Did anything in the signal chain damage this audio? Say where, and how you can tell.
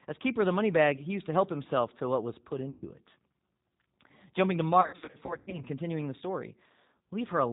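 Yes. Throughout, the codec stage applies G.729 at 8 kbit/s. Speech is band-limited to 4 kHz and sounds rough and synthetic, unlike a simple low-pass filter, which would stay smooth.

Network packet loss concealed by the speech codec occurs at 2.70–2.85 s and again, scattered, from 4.81 to 5.63 s. The decoder stretches its last pitch into fading buzz, then recovers sluggishly, unlike an abrupt dropout to silence.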